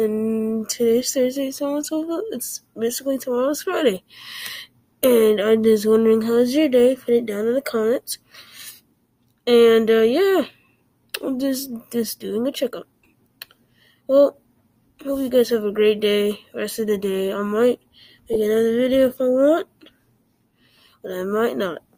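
A brief squeaky blip interrupts the sound from 5.61 to 5.65 s, a fainter tick-like chirp follows from 13.04 to 13.06 s, and a much louder burst of noise hits from 18.33 to 18.37 s, peaking near about -10 dBFS. Each is a corrupt frame decoded: flipped bits in the compressed data led the decoder to play the damaged frames anyway, misplacing energy across frequencies. The lengths point to one to a few frames each.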